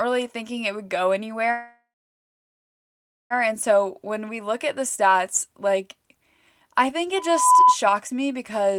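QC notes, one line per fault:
1.51–3.33 s, call audio freeze: likely packets stalled and the jitter buffer emptied; the last sound is stretched into a fading fill, then about 1.4 s of silence, before speech resumes late.
7.16–7.77 s, loudspeaker feedback squeal: the microphone re-amplifies its own loudspeaker, so a 1 kHz tone swells over roughly 0.4 s to about 10 dB above the speech.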